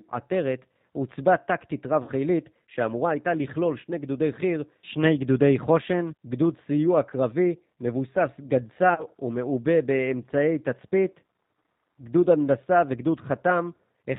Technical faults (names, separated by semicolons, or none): G.729 codec; VoIP packet loss concealed by the speech codec